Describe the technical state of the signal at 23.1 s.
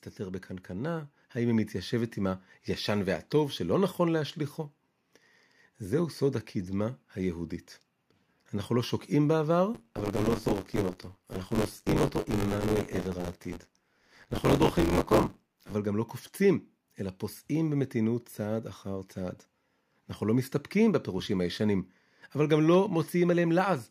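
Around 23.1 s the signal is intact, with no dropout, distortion, glitch or other fault audible at that moment.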